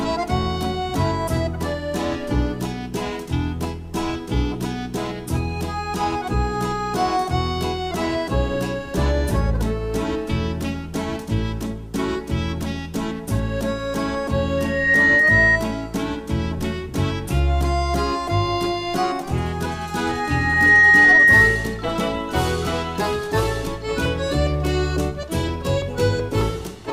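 Loudspeaker feedback squeal appears at 14.58 to 15.60 s and again at 20.09 to 21.88 s, both times a single tone near 1.9 kHz. A microphone is hearing its own loudspeaker, and at that frequency the loop gain passes one, so the tone feeds itself. It swells over about a third of a second the first time and more slowly, under a second, the second time, peaking roughly 10 dB above the surrounding sound.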